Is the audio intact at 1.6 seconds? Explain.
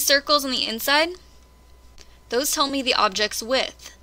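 No. At 1.6 seconds the audio is affected by clock drift between sender and receiver, present throughout the clip. The sender's clock runs about 1 percent slow, so the jitter buffer drains and short pieces are repeated or briefly missing, heard as small, unevenly spaced timing hiccups.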